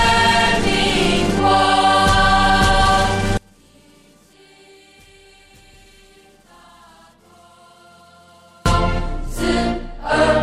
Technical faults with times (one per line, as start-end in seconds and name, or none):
3.37-8.66 one channel inverted